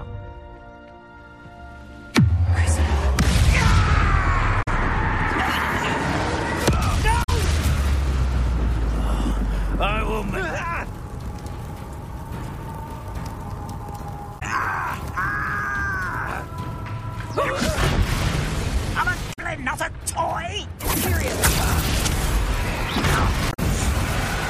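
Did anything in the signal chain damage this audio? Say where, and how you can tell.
Yes. The damage is at the codec stage: damaged data in a compressed stream. Brief squawks or blips occur at 4.59, 7.20, 14.36, 19.29 and 23.50 s. Each lasts about 70 to 100 ms. Corrupt bytes made the decoder misread frames, lose sync and hunt for the next header.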